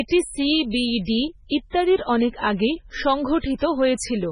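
Heavy MP3 compression is the likely cause of the damage throughout: starved of bits, fitting roughly 16 kbps, the encoder removes everything above 10.5 kHz, leaving the speech watery and swirling. Pre-echo occurs when the codec spreads block noise ahead of sharp attacks, producing brief hiss at 1.05 s after "সি বি", 1.70 s after "সি বি ডি", 3.40 s and 3.58 s, each lasting 29 to 43 ms.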